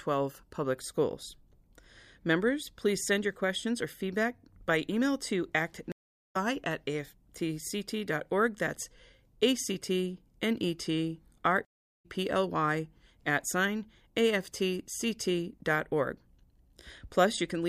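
At 5.92 s the speech cuts out in a stream reconnect: the connection dropped, the player fell silent for 428 ms, then reconnected and started a new decoder partway through the stream. Speech resumes at 6.36 s about 0.4 s further on, so that stretch is skipped outright. A second reconnect at 11.65 s leaves a 392 ms gap, and speech resumes at 12.06 s about 0.2 s later than where it stopped.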